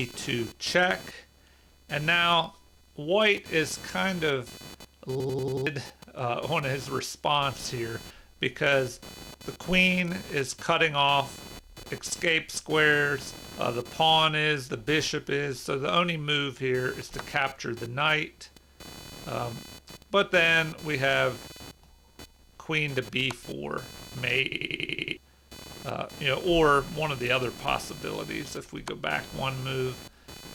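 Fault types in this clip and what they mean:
computer activity noise: A buzzy, chirpy layer runs under the whole clip, pulsing at around 500 Hz and sitting roughly 20 dB below the sound. It comes from load swings in the processor, graphics card or mouse pushing the shared ground of the audio circuit around. So it rises and falls with what the computer is doing, not with anything in the audio itself, which is why it never lines up with the sound.
system hang loop: The machine or its driver stalled while the sound hardware kept replaying the same chunk of its ring buffer. Here one piece about 93 ms long, which fits a 4096-sample buffer, repeats at roughly 10.8 Hz. That gives a machine-gun stutter from 5.20 to 5.67 s and again from 24.52 to 25.17 s. Roughly half a second of audio goes missing the first time and about 0.7 s the second.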